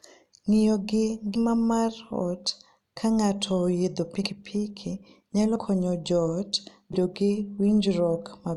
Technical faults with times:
1.35-1.38 compressed frames skipped
4.23-4.29 compressed frames skipped
5.55-5.60 compressed frames skipped
6.93-6.96 compressed frames skipped

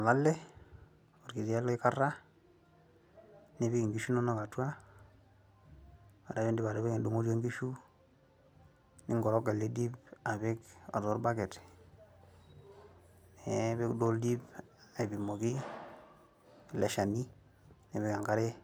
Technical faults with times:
none

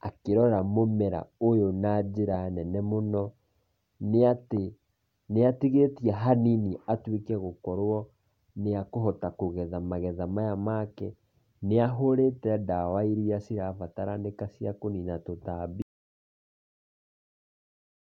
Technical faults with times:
15.82-18.13 audio dropout to silence

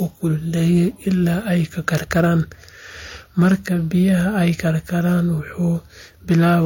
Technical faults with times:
0.00-6.66 transcoding between lossy codecs
1.88-2.28 hard clipping
3.40-3.54 hard clipping
6.31-6.55 hard clipping

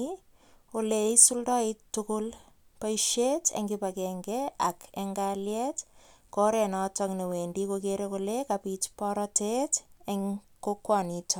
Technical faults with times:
none

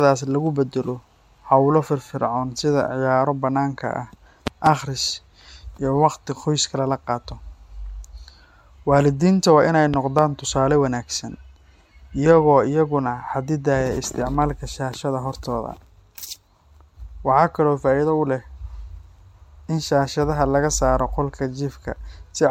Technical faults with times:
0.00-22.50 generation loss
4.47-4.69 loud pop
9.94-10.21 loud pop

